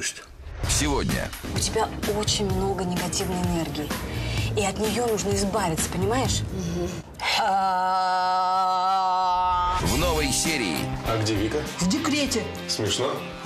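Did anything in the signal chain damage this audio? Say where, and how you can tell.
No, nothing along the way seems to have harmed this audio, and I didn't hear anything anywhere in it that points to a problem at any stage of the chain.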